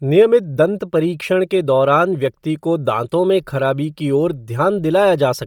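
From start to end the speech carries heavy transform-codec damage: the voice turns grainy and breathy, with a thin, smeared top end. This is likely Bluetooth LC3 compression at a low rate, consistent with around 32 kbps, which discards much of the upper spectrum and substitutes noise fill. On a spectrogram the high band shows patchy, noise-like blocks that change at a steady rhythm fitting 10 ms frames, and the waveform's fine detail looks softened.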